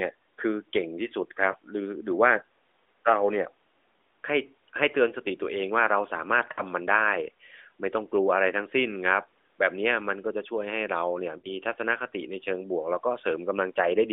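At 1.52 to 1.56 s, 6.52 to 6.61 s and 11.38 to 11.50 s the audio shows lost AMR speech frames. Radio errors corrupted frames, so the decoder repeated the last good pitch and vocal-tract settings at falling gain. The first is a brief dip or warble, consistent with one 20 ms frame. The other two fit about 60 ms each and stretch and fade. Unlike a plain packet gap, there is no hard silence or click. The light AMR-NB coding in its band of about 250 Hz to 3.6 kHz fits the 12.2 kbps mode.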